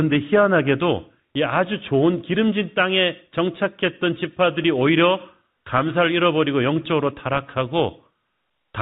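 Listening through this speech, nothing stood out beyond the narrow band of ordinary G.711 telephone coding.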